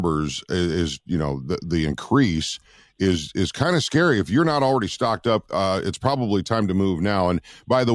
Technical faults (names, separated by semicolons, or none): none